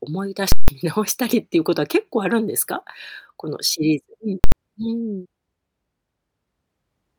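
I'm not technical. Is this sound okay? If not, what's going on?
No. Twice in this speech clip the audio jumps to a flat extreme level far beyond the speech's peaks, a fault called invalid numbers at full scale. From 0.52 to 0.68 s you hear a very loud pop, a short silence, then another pop. At 4.44 to 4.52 s the block is shorter, so it comes out as one bang. Unlike ordinary clipping, which roughens loud speech, this wipes out the sound completely for that moment.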